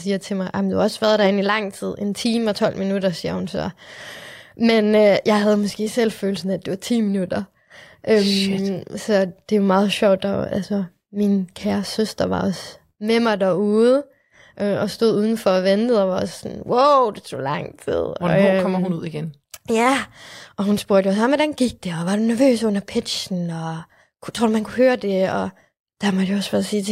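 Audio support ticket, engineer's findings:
No faults found in this speech recording.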